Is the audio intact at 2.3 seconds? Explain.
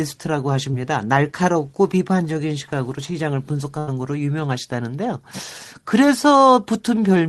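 Yes, at 2.3 seconds the speech carries on intact, with no dropout, click, distortion or other fault at that moment.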